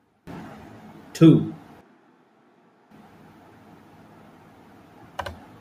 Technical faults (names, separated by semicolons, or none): switch to a distant microphone